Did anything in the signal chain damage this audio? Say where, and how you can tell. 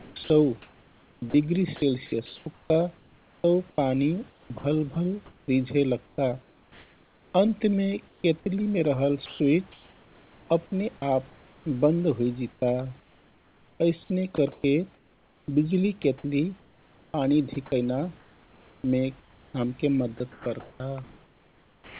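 Yes. Call processing upstream of the codec likely chopped the speech through the voice detector: from 0 to 4.96 s, 6.06 to 11.02 s (up to "आप बन्द") and 12.52 s to the end, quiet edges drop into comfort noise, with about 2.2, 2.2 and 4.5 s swapped out.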